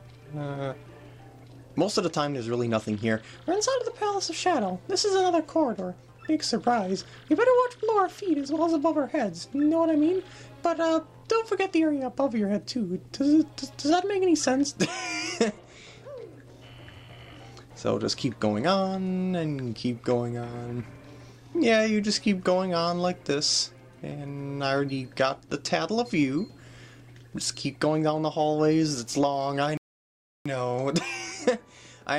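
At 29.77 s a rebuffering stall cuts the sound to silence until 30.46 s. Playback ran dry and waited for more data, then resumed where it stopped, adding 0.68 s. The waveform shows a flat gap; the spectrogram, a blank vertical band.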